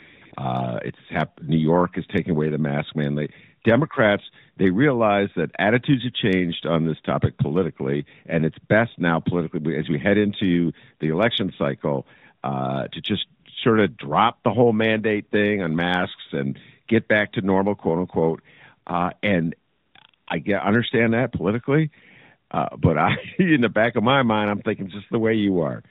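AMR comfort noise fills 0.00 to 0.22 s, 0.26 to 0.32 s, 0.34 to 0.36 s, 20.10 to 20.14 s and 20.16 to 20.28 s. Speech frames stopped there, so the receiver filled the gaps with smooth synthetic hiss. On a spectrogram these are flat, featureless patches capped at 4 kHz, and on the waveform they are low, even bands.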